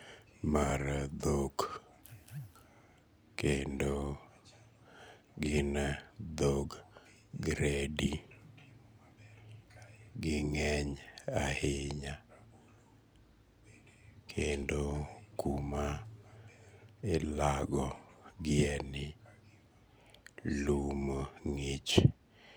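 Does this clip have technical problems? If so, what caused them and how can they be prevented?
Yes. There are three short jumps where the speech skips ahead, at 0.70 s, 14.63 s and 17.96 s. At each one, a small slice of audio just goes missing with no gap: about 20 ms at the first and around 10 ms at the other two. That's most likely a dropped buffer (overrun), where the recording software didn't collect the samples before the hardware overwrote them. Larger buffers and a less loaded recording machine should prevent it.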